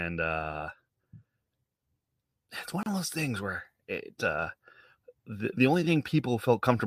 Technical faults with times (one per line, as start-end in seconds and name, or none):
2.83-2.86 gap at a join of encoded pieces